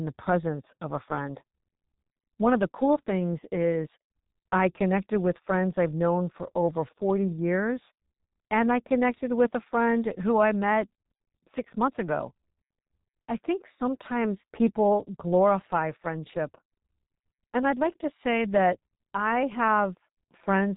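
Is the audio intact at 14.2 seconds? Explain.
No. At 14.2 seconds, as everywhere in the recording, the speech carries G.723.1 codec damage, and it is heavy. The codec encodes speech in 30 ms frames with a coarse vocal-tract model that updates slowly, which fits a rate of about 6.3 kbit/s, and it discards everything above 3.8 kHz. The result at this moment is muffled, hoarse speech with smeared consonants and no high-frequency detail.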